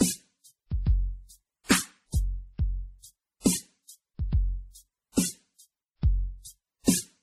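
Throughout the music, transcoding between lossy codecs is likely: smeared, swirly artefacts sound doubly layered, unlike one codec's, pointing to a low-rate MP3 re-encoded as WMA, with nothing above 15.1 kHz.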